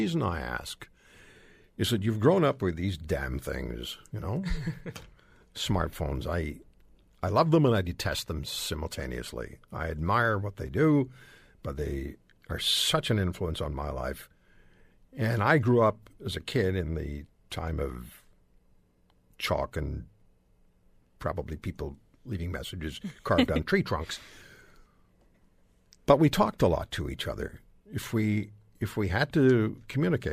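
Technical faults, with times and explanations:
No technical faults can be heard in this speech recording. There is nothing to list with a time or an explanation.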